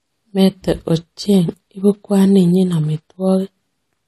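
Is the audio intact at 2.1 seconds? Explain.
No. At 2.1 s, as across the whole clip, the speech has likely gone through transcoding between lossy codecs, an AAC-style encode at a low bitrate around 48 kbit/s then re-encoded as MP3 near 64 kbit/s. The second encoder spends bits on the first one's artefacts and adds its own, so two kinds of swirly, smeared coding noise sit together, and nothing remains above 14 kHz.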